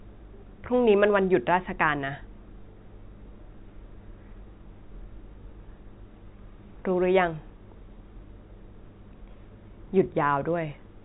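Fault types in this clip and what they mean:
No faults in this clip.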